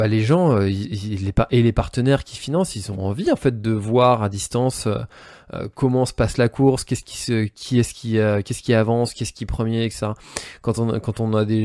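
Nothing goes wrong anywhere in the speech here; there's simply no technical fault to point to.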